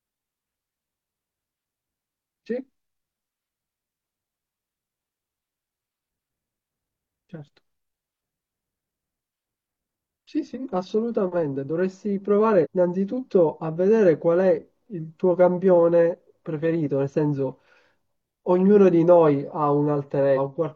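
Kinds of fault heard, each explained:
Damaged data in a compressed stream: Part of the coded speech stream arrives corrupted, so the decoder cannot read those frames correctly. It loses its place and hunts for the next valid frame header before carrying on. In this clip that happens twice. The first is a short blip from 12.61 to 12.67 s. The second runs from 20.33 to 20.39 s, near the end. They last about 60 ms and 54 ms.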